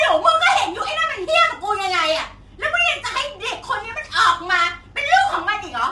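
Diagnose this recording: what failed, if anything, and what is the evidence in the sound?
The codec stage is at fault, most likely low-delay AAC compression of the AAC-ELD kind used for video calls, at a rate consistent with about 32 kbps. At this low rate its coarse quantization leaves noise between the voice's pitch harmonics, so from start to finish the speech sounds rough and grainy, with noise filling the gaps between harmonics. The top band is cut, with nothing above 11.6 kHz, and the damage is plainly audible throughout.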